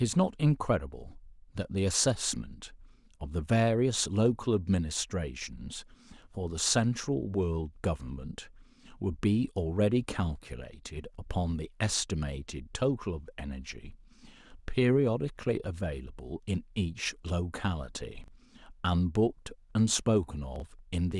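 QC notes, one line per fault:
18.24–18.28 s and 20.56–20.62 s, chunks out of order: a 20 ms chunk lands one, then two, slots late, giving a jumbled blip.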